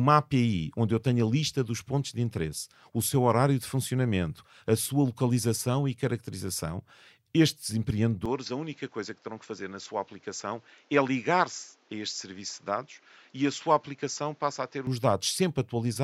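Right after "localização e caracterização estes", at about 8.26 s, the speech goes duller and a bit quieter with no gap. Nothing survives above 7.6 kHz, and a new noise floor sits well below the voice. That's likely an input switched to a poorer device, and it lasts until 14.87 s.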